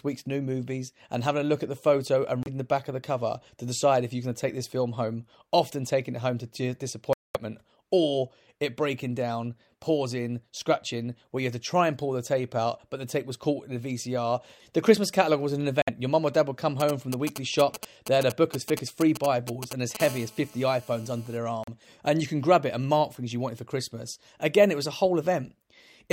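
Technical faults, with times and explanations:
2.43–2.48, 7.13–7.37, 15.82–15.89 and 21.64–21.69 s, Bluetooth stall: the speech drops abruptly to dead silence for about 30, 217, 57 and 39 ms, then resumes. This is likely a wireless link whose receive buffer ran empty while delayed packets were resent. On a waveform each gap is a flat, near-silent line with hard edges; on a spectrogram it is a clean vertical blank strip across all frequencies.
16.80–19.97 s, GSM signalling bursts: a galloping dit-dit-dit pattern of short buzzes sits around 10 dB below the speech. A nearby 2G phone exchanging control traffic radiates intermittent groups of bursts at about 217 per second, and the audio circuitry rectifies them. On a spectrogram it shows as clusters of short vertical stripes with a 217 Hz harmonic comb; the waveform shows bunched spiky pulse trains riding on the speech.
20.0–21.38 s, GSM phone buzz: a hard, raspy, continuous buzz at 217 Hz, rich in harmonics and unrelated to the speech, sits about 18 dB below it. 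A 2G phone in an active call transmits steadily at that burst rate, and the audio electronics demodulate the radio pulses into sound. On a spectrogram it forms evenly spaced horizontal lines at multiples of 217 Hz reaching well up into the kHz range; the waveform carries a regular sharp-edged pulse train.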